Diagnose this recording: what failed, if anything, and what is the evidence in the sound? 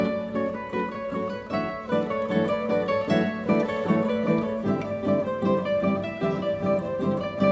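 Nothing in the recording points to a failure at any stage, so there's nothing here to diagnose and the audio can be taken as it stands.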